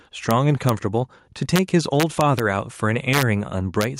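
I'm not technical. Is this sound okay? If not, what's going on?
No. Two problems can be heard in this speech. The first is gain pumping, heard all the way through. Loud and soft parts end up closer in level, and the sound is squashed. The likely cause is a recording level set far too high, with automatic level control pulling it down on each loud sound.

The second is integer overflow. It causes harsh, violent cracks at 0.31 s and 0.69 s, and from 1.56 to 1.59 s, 2.00 to 2.40 s, 3.14 to 3.23 s, and 3.81 to 3.84 s. On loud peaks, the audio runs past its maximum value and flips to the opposite extreme. That is why it sounds much sharper than ordinary distortion.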